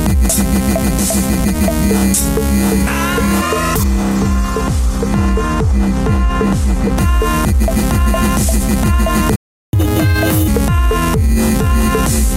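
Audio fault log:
3.83 to 6.98 s, de-emphasis applied wrongly: a treble-cut filter acted on audio that had no pre-emphasis or had already been de-emphasized, cutting 10 kHz by about 14 dB relative to 1 kHz, so the sound turns dull and muffled.
9.36 to 9.73 s, playback stall: the player likely ran short of buffered data, and output drops to silence for 0.37 s before the sound resumes.
9.73 to 10.48 s, catch-up at higher speed: the player resamples its backlog at 1.5 times normal speed, so the sound rushes and rises about seven semitones before settling back.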